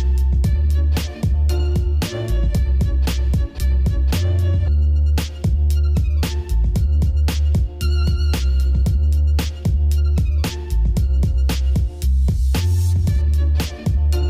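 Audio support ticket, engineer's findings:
No fault found on listening; the clip gives no audible symptom to trace to any component in the chain.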